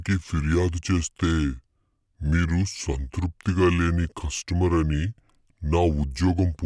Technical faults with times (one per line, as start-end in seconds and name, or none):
0.00-6.65 wrong sample rate